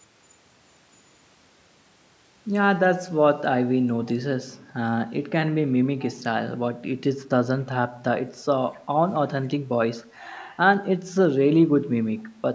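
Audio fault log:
4.05–4.14, 5.99–6.19, 8.73–8.78 and 9.98–10.06 s, echo leak: faint scraps of the speech return about 254 ms late, roughly 20 to 35 dB down, likely residue a loudspeaker-side echo canceller failed to remove.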